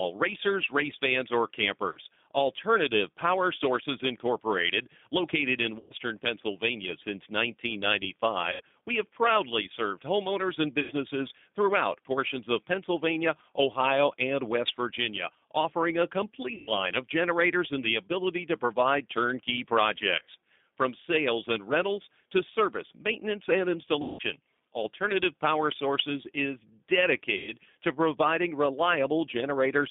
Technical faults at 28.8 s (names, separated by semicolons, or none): G.729 codec